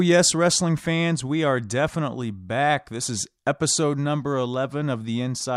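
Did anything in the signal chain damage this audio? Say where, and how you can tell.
No, nothing along the chain left a mark here: there's no point in this speech where a stage can be heard stepping on the signal, so there's nothing to trace back.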